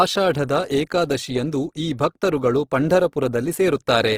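Speech with plainly audible Opus compression throughout, likely from its music (CELT) mode at a low rate that fits about 16 kbps: the speech turns grainy and rough, and a spectrogram shows noise-filled bands reaching about 20.4 kHz with nothing above.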